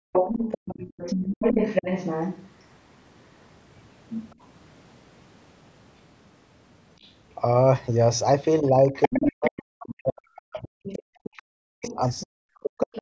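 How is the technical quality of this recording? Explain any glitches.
The recording has echo-canceller faults throughout. Its bandwidth stops at 8 kHz, as a call path would.

From 0.00 to 0.12 s, the background is gated by the echo canceller. The room sound drops by about 40 dB for roughly a tenth of a second while the far end plays.

Other-side voice leaks through at 0.12 to 2.46 s, 4.31 to 4.35 s, 7.01 to 7.12 s, 8.94 to 9.86 s and 10.86 to 13.01 s. The likely cause is incomplete echo removal. The first and fourth stretches are nearly as loud as the talker. The others are faint.

From 8.61 s to the end, speech is suppressed in double talk. Both sides overlap, and the canceller likely ducks the talker too. The voice drops deeply, in pieces totalling about three seconds.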